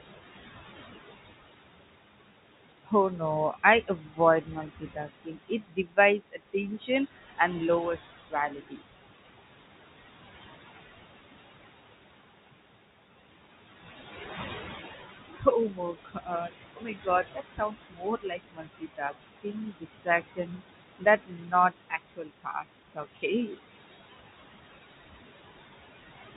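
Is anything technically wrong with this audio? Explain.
Yes, there are two related faults, both from a noise suppressor working hard on speech recorded with room noise about 10 dB below the voice. The audio also passes through a call path with nothing above 4 kHz, which fits narrowband G.711 telephone coding.

Noise suppressor artifacts run through the whole clip. The suppressor estimates which frequency bands hold steady noise and pulls them down frame by frame, here by about 18 dB. Between phrases the background sinks away, then climbs back under the voice, leaving a warbling, fluttery residue. On a spectrogram the noise floor shows as blotchy, flickering speckles that vanish in pauses. The waveform shows near-silent gaps with faint noise returning only under speech.

Speech cut by the noise suppressor occurs at 2.84–3.21 s, 3.53–6.89 s, 7.97–8.86 s, 15.33–20.62 s and 20.98–23.57 s. In these spans the suppressor mistook quieter parts of the speech for noise and attenuated them along with the background, by about 20 to 22 dB at worst. 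The affected portions add up to roughly a tenth of a second in the first span, around one and a half seconds in the second, under half a second in the third, about three seconds in the fourth and about a second in the fifth. Soft consonants and word endings sound swallowed or faded. On a spectrogram, fricative energy and the tails of syllables appear as dark holes. In the waveform, the envelope collapses abruptly before a word should naturally decay.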